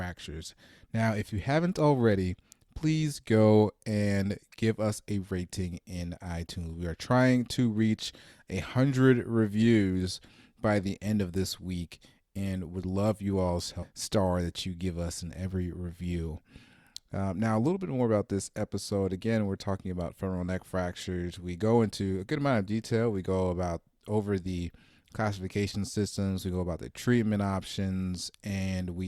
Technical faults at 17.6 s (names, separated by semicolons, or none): none